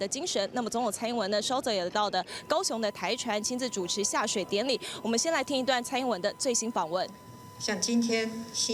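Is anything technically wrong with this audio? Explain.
Yes. From about 2.31 s to the end, a USB whine sits under the sound. It is a steady, fixed-pitch tone at 1 kHz, strongest at that frequency and roughly 25 dB below the signal. The USB bus pulls current in bursts once every millisecond. Those 1 ms pulses leak into the audio through shared power or ground. The result is a thin, constant whistle that does not follow the material.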